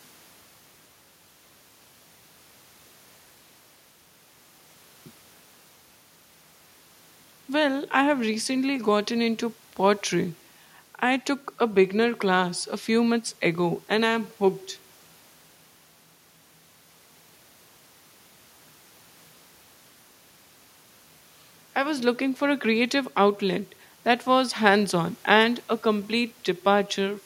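No technical faults are audible anywhere in the recording.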